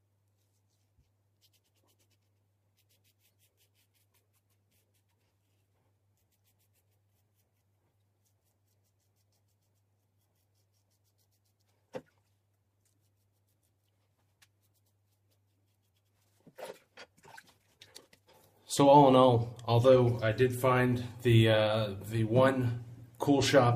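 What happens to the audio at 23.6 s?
Nothing goes wrong at 23.6 s; the audio plays through that moment intact, with no fault to be heard.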